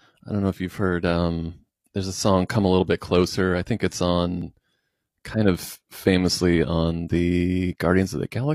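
At 4.42 s the speech skips forward, an overlap between stream segments: about 32 ms of audio is discarded where two segments' time stamps collide, so the waveform jumps across the gap. Unlike a dropout, no silence fills the gap.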